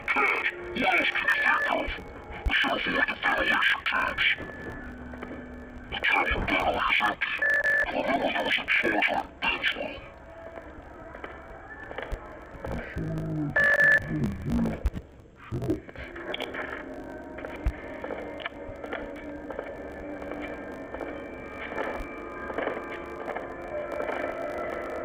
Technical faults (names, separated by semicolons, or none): interleaved audio read as planar